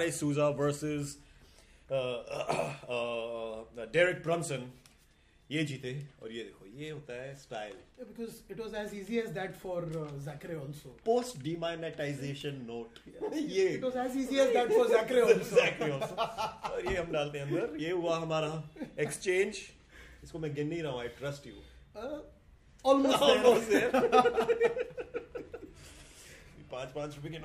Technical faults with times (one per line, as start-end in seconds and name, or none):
none